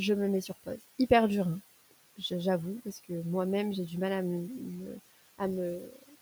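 Throughout the clip, a noise suppressor is treating the steady background as noise and pulling those bands down by about 16 dB frame by frame. The room noise, sitting about 18 dB below the speech, sinks in the gaps and returns under the speech.

From 2.83 to 3.1 s, just after "dur hein j'avoue", the suppressor mistakes part of the speech for noise, producing speech cut by the noise suppressor: roughly a tenth of a second is pulled down by up to about 16 dB and sounds swallowed. From 5.81 to 6.16 s the same error hits around a third of a second, dropping it by up to about 13 dB, so that stretch fades faint.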